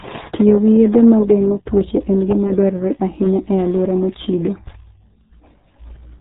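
Throughout the speech, the RealAudio 14.4 codec leaves a muffled, gargly sound, which fits an 8 kbit/s stream. A spectrogram shows a hard ceiling with nothing above 3.8 kHz.

From 0.15 to 6.16 s, faint regular ticks recur about every 0.2 s, roughly thirty in all. These are clock slip clicks, likely from unsynchronised clocks drifting around 100 ppm apart and dropping or repeating single samples. They appear as tiny waveform steps and thin vertical spectrogram lines.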